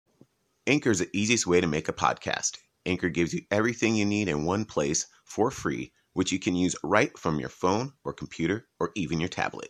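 Nothing stood out on listening to the speech in this recording.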